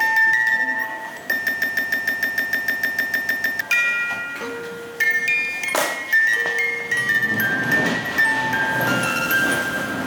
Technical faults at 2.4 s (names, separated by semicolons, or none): broken-record loop